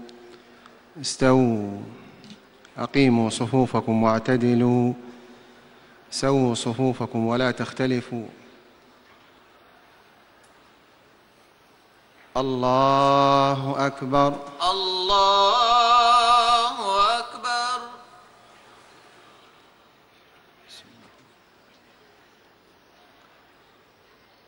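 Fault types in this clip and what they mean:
There are no fault types in this clip.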